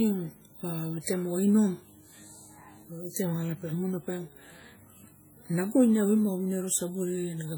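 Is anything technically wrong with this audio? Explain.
Yes. Throughout the speech there is heavy damage that sounds like WMA compression, likely from low-bitrate encoding, which fits about 32 kbps. Long transform blocks smear quantisation noise over tens of milliseconds, giving ringing, washy tails and hiss that breathes with the signal. A spectrogram would show blurred, smeared onsets and patchy gaps where weak components were zeroed, although content still reaches about 20.1 kHz.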